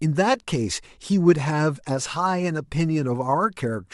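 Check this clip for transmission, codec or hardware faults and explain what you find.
Nothing turned up here: the speech runs through without any transmission, codec or hardware trouble that I could pick out.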